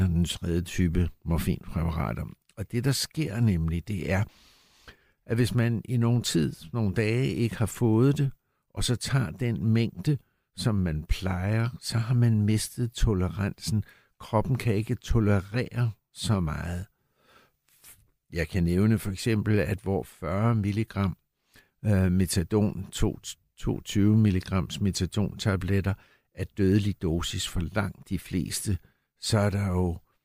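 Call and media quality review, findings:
No call or media quality findings to report for this speech recording.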